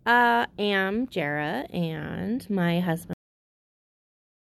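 The final stretch of audio was never written out or played, leaving a cut-off end on this speech clip. At 3.13 s, right after "and my", the signal stops in the middle of a sound with no natural decay, and it drops straight to digital silence. That silence holds from 3.13 s until the file ends at about 4.4 s, so the last 1.3 s carry nothing, consistent with the closing buffers going missing.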